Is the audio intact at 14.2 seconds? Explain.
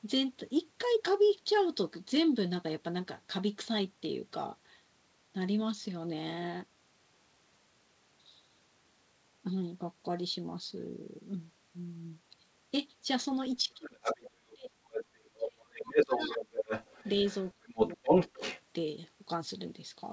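No. From 13.65 to 16.42 s the speech is pulled down in pieces, at its deepest by roughly 30 dB. This is speech suppressed in double talk, likely from an echo canceller that could not tell the talker from loudspeaker echo. The waveform shows sudden collapsed stretches, and the spectrogram shows gaps and thinned upper bands.

From 13.85 to 15.05 s the other side's voice leaks through, only a few dB below the talker. The likely cause is echo that the canceller left in the microphone signal. On a spectrogram it appears as a second, overlapping harmonic pattern.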